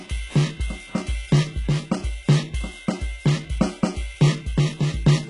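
From start to end the music carries heavy HE-AAC compression damage, likely from a very low bitrate near 12 kbps, with treble rebuilt by band replication, gritty and metallic, and nothing above 11.1 kHz.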